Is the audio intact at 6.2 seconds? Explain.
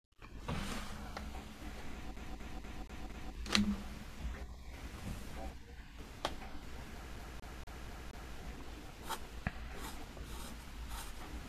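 Yes, at 6.2 seconds the audio is intact, with no fault audible at that moment.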